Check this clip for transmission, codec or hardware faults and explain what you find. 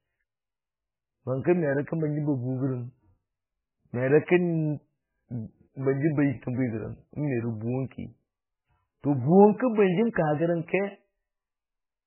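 One fault is present, and it runs through the whole clip. The speech has nothing above 3 kHz. It sounds watery and swirly, and attacks smear. This likely comes from heavy MP3 compression, fitting a rate near 8 kbps. Short of bits, the encoder cuts the treble. Weak frequency lines flicker on and off between frames.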